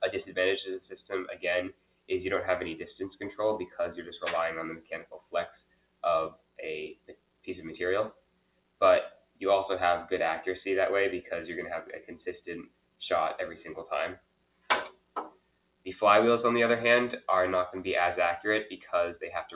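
A speech-tuned noise suppressor stayed active on non-speech audio. It treats sustained tones, ambience and reverb as noise, so level swings by around 20 dB: onsets punch through while held sound and decay sink, giving a pumping, fluttering, thinned texture across the whole clip. Sound cut by the noise suppressor is clearest at 1.29–2.1 s, 4.76–7.48 s, 8.1–9.42 s, 12.0–13.01 s and 14.16–15.87 s, with drops of about 20 dB, and at 18.7–18.93 s, about 9 dB. In each span, sustained passages and tails fade or stop short for a fraction of a second to over a second. Through the call path, the band-limited sound with nothing above 4 kHz fits G.711 mu-law at 64 kbps.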